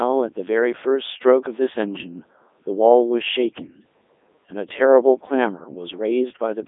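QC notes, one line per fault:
throughout, Codec 2 vocoder: speech rebuilt from pitch, energy and envelope as sine waves sounds buzzy and robotic, confined to 250 Hz–3.6 kHz, consistent with 3.2 kbit/s.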